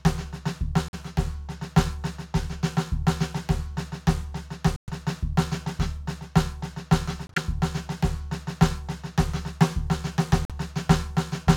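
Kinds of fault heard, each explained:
Corrupt frame muted: the music cuts to silence four times, at 0.88, 4.76, 7.27 and 10.45 s, in abrupt holes of 66 to 136 ms. That fits a few damaged compressed frames being rejected and replaced with silence, with timing carrying on unchanged afterwards.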